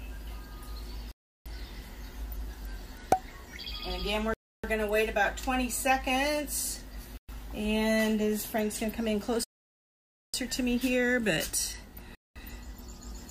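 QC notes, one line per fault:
1.12–1.46 s, 4.34–4.64 s, 7.17–7.29 s, 9.44–10.34 s, 12.15–12.36 s, Bluetooth stall: the sound cuts to full silence for about 0.34, 0.30, 0.11, 0.90 and 0.21 s, likely because interference emptied the headphones' buffer. The uneven lengths and irregular spacing set these apart from steady, periodic buffer underruns.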